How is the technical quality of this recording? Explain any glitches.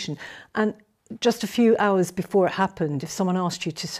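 Nothing stood out on listening; I heard no glitches or technical problems anywhere in the recording.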